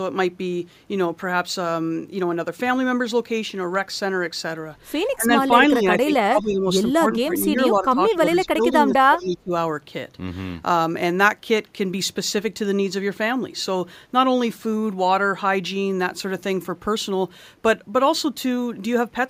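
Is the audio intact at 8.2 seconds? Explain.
No. The speech at 8.2 s sits inside a stretch from 6.97 to 9.52 s where the voice dips, thins and breaks into pieces. At its deepest it falls by about 25 dB, and together the affected pieces add up to roughly a second and a half. This is speech suppressed in double talk. Both ends were most likely talking at once, and the echo canceller, unable to tell this talker apart from loudspeaker echo, turned everything down.

Just before that moment, from 8.11 to 8.17 s, a faint, brief scrap of repeated voice slips through, trailing the original by 212 ms and sitting about 25 dB below the speech. This is echo leak. One side was likely playing the call on a loudspeaker, and its echo canceller failed to remove all of what its microphone picked up, so a delayed fragment was sent back.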